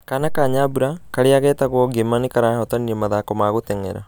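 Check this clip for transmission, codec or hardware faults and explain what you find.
No transmission, codec or hardware faults.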